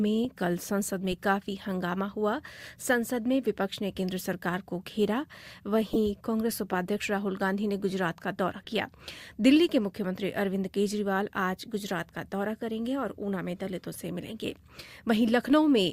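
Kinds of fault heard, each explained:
Corrupt frame decoded: damaged bits inside compressed frames were decoded anyway, so misread codes and gains put energy in the wrong frequencies for the length of each bad frame. Three short bursts can be heard at 5.93–5.97 s, 8.64–8.69 s and 14.29–14.32 s, spanning roughly two, three and one frame. The first peaks near -10 dBFS and the others are quieter. On a spectrogram each appears as a brief, misplaced block of energy, and on a waveform as a sudden, out-of-place spike.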